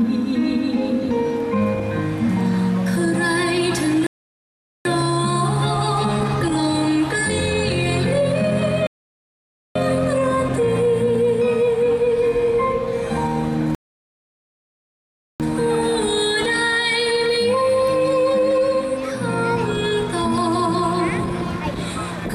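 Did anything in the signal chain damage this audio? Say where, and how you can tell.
Yes, at playback: three rebuffering stalls, silent from 4.07 to 4.85 s, 8.87 to 9.76 s and 13.75 to 15.4 s, as the player ran dry and waited for data. Unlike a dropout, sound resumes exactly where it stopped. Nothing is skipped, only time added.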